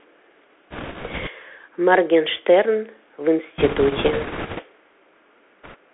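The speech here has been carried over a Bluetooth CVSD headset codec, a one-bit delta modulator whose step size adapts as it goes. The sound is held to a telephone band of roughly 300 Hz to 3.4 kHz, which fits a 64 kbps CVSD link. The damage is plainly audible: sibilants come out scratchy, loud bright passages smear where the step size can't keep up, and a grainy hiss sits under everything. On top of that come bit errors on a Bluetooth voice link, where flipped bits corrupt the delta stream. Because each bit moves the signal only slightly and the error fades quickly, these errors produce no sharp clicks. Instead a rushing, crackly noise rides over the speech from 0.71 to 1.30 s, heaviest from 3.58 to 4.62 s where the error rate is around 4 percent, and briefly and more lightly from 5.64 to 5.75 s.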